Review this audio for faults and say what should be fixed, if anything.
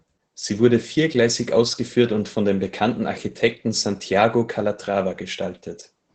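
Opus voice compression is plainly audible across the whole speech clip. Nothing is present above about 8.7 kHz, which fits wideband SILK coding. The coarsely quantised excitation leaves the speech muffled, hoarse and faintly robotic, consistent with a bitrate near 12 kbps. To prevent it, encode at a higher Opus bitrate or keep an uncompressed source for this material.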